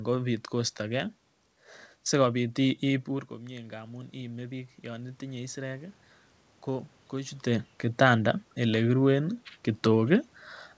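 A speech clip in which the automatic gain control rises after the input drops. Around 3 s the talker moves away from the microphone and the level falls by about 12 dB. From 3.08 to 6.03 s the gain control treats this as too quiet an input and slowly raises its gain by about 7 dB, so the voice climbs back over those three seconds and the room noise swells with it. Around 7 s the talker moves again. Throughout, the sound stops at 8 kHz, which fits a G.722 call codec.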